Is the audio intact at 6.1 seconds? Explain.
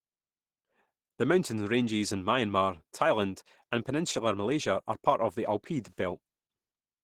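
No. At 6.1 seconds, as across the whole clip, the speech sounds muffled and hoarse, with a rough, grainy texture that is plainly audible. The likely cause is Opus compression at a very low rate, consistent with about 16 kbps, where the encoder shifts into its hybrid speech mode. With so few bits, bands are filled by folding lower ones or with noise rather than coded in detail, producing this coarse, husky quality.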